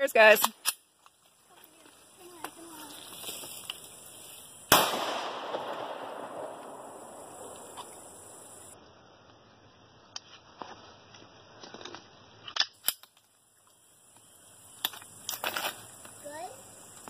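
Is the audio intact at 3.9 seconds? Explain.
Yes, the audio is intact at 3.9 seconds, with no fault audible at that point.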